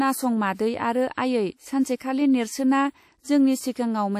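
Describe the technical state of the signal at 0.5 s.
Pre-echo from 0.54 to 0.59 s: a short hiss rises about 55 ms before the attack of "आरो आयै", which then sounds softened. The codec spread quantisation noise sized for that loud onset evenly across its block, filling the quiet gap just before it.

WMA compression runs through this moment and the whole speech clip: a plainly audible ringing, washy texture with hiss that swells and fades with the signal, and nothing above 16.2 kHz. The likely cause is WMA 1 encoding at a low bitrate, which fits about 48 kbps.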